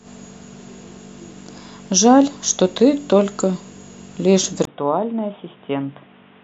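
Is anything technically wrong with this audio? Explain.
Yes. At 4.65 s, after a 20 ms gap, the speech turns dull and quieter, capped at 3.8 kHz with new background noise, likely an input switched to a poorer device.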